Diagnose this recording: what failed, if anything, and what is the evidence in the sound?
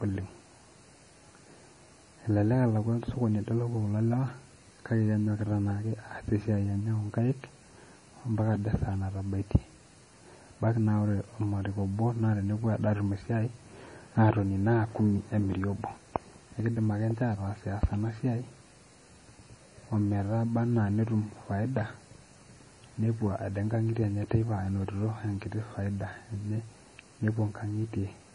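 The codec stage failed: this speech is low-bitrate audio saved at a high bitrate. Throughout the recording, nothing exists above 10.5 kHz, and the swirly, smeared texture of heavy MP3 coding remains despite the generous file size. That most likely comes from a roughly 32 kbit/s MP3 re-encoded at a much higher rate, which cannot restore discarded detail. A spectrogram shows a hard, flat ceiling at 10.5 kHz for the full duration, with patchy, blocky energy below it.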